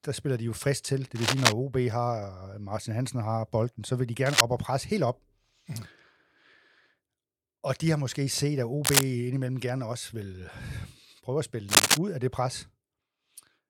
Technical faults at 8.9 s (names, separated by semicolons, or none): cable scratch noise